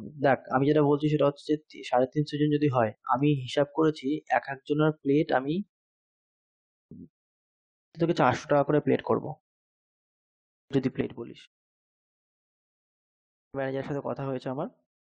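It's a speech clip with clipped starts after pauses at 6.30, 7.38, 10.15, 12.06 and 12.93 s. Each time, roughly 0.55 to 0.61 s of the opening sound vanishes after a gap of 0.33 to 0.81 s, so the speech jumps in without its first sounds while the output device wakes and relocks. At 11.01 s there's a sudden gain jump, with speech and background dropping together by about 8 dB and staying down through the end, likely a gain change or bit shift applied without a ramp. The pauses themselves go quiet as expected.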